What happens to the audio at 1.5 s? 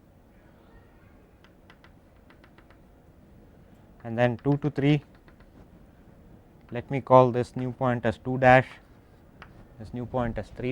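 Nothing goes wrong at 1.5 s: the audio plays through that moment intact, with no dropout, click, glitch or other fault.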